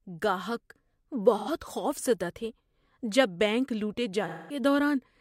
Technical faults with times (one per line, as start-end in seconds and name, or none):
1.37-1.48 AAC frame loss with concealment
4.27-4.59 AAC frame loss with concealment